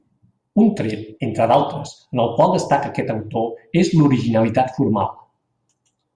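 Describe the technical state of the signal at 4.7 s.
At 4.7 s the speech signal is intact, with no technical fault present at that moment.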